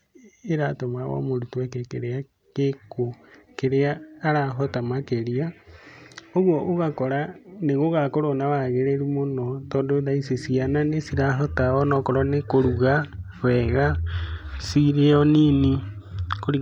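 No technical faults are audible anywhere in this recording.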